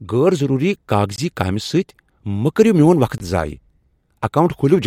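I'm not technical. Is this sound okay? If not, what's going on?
No. The speech drops out twice, at 1.16 s and 3.18 s. Each time there is a block of digital silence lasting 20 ms. The sound stops and restarts abruptly, with no fade. This happens when the playing program fails to supply audio in time, or produces invalid numbers.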